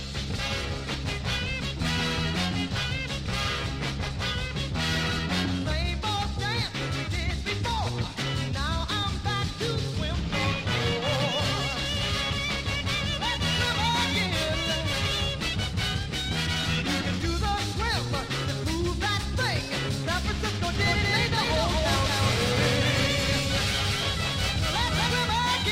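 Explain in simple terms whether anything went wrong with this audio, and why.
From 20.75 s to 25.07 s the audio has a doubled audio track: everything is heard twice, the second copy trailing about a fifth of a second behind and roughly as loud as the first. Unlike a real echo, the copy doesn't fade or sound like a room; it simply switches on and off abruptly at those times. The likely cause is the same sound being picked up a second time through a slower route.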